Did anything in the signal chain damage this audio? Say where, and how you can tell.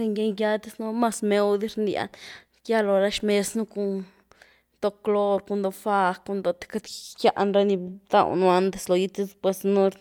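No, nothing in the speech points to damage at any stage of the chain.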